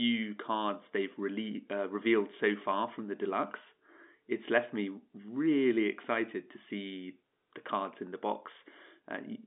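No technical faults can be heard in the speech. It carries the sound of G.711 telephone coding, with the band running from about 200 Hz to 3.7 kHz and nothing above 3.8 kHz.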